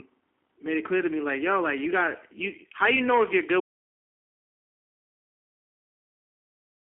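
Throughout, the speech passes through a G.729 codec, likely an 8 kbit/s stream. This leaves a roughened, slightly synthetic tone, plainly audible, with nothing above 3.6 kHz. At 3.60 s, just after "you know if you're", the input was likely lost, causing an audio dropout to silence: the speech cuts off mid-phrase and digital silence, with no room tone, runs to the end.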